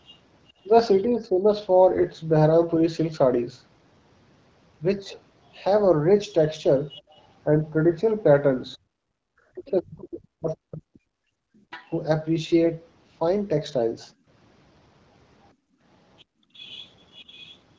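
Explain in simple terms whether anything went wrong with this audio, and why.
Other side's voice leaking through, at 0.05 to 1.02 s, 6.89 to 11.91 s and 16.18 to 17.57 s: a faint second voice is audible, louder in the later two stretches, likely loudspeaker sound the echo canceller failed to remove.

Speech suppressed in double talk, at 1.11 to 1.46 s and 9.51 to 11.27 s: the main voice dips briefly, then cuts out in pieces while the other voice overlaps, likely as the canceller turns both down.

Background gated by the echo canceller, between 8.77 and 16.53 s: the room sound drops away almost completely, about one and a half seconds in all, while the canceller clamps the microphone.

AMR bit errors, at 12.63 to 12.70 s: a short hoarse, gargly burst, where a few damaged pieces of the compressed signal were decoded wrongly.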